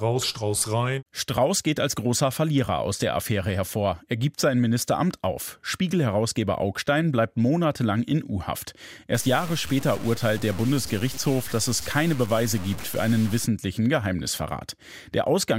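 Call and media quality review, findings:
Low bit depth without dither, 9.15 to 13.46 s: speech turns grainy and gritty, with the grit tracking the voice and quiet tails sputtering out. Likely a truncating requantiser, sounds like about 5 bits, error roughly 15 dB under signal.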